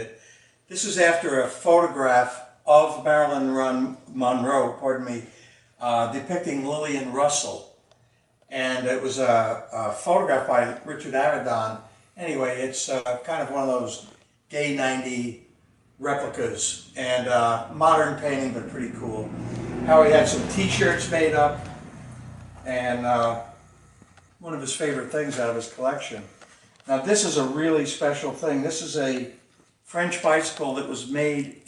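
A burst of packet loss at 12.99 to 13.07 s: about 60 ms of consecutive packets never arrived, so the receiver extended and faded the preceding sound before resuming past the gap. Short concealed packet loss at 29.61 to 29.65 s: roughly 20 ms went missing, patched by continuing the last sound and blending back, leaving a brief smear.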